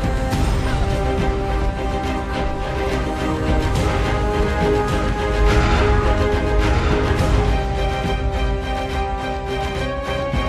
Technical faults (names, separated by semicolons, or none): doubled audio track